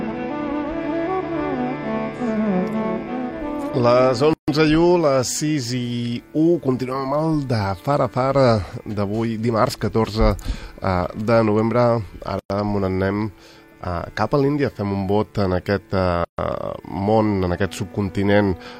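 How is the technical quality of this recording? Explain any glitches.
Three short dropouts interrupt continuous sound, at 4.33 s (145 ms), 12.39 s (108 ms) and 16.24 s (139 ms). Each is a gap at a join of encoded pieces. Separately encoded segments were spliced untrimmed, so encoder delay and end padding leave silence. Edges are smeared by the codec, and the sound resumes where it stopped.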